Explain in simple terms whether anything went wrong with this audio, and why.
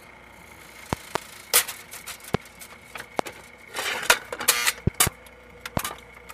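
Seven loud pops cut through the audio: double pops at 0.93–1.18 s and 4.87–5.09 s, and single pops at 2.34, 3.19 and 5.77 s. Each is a sharp thump well above the sound, which continues underneath. A brief electrical spike, such as static or a switch, is the likely cause.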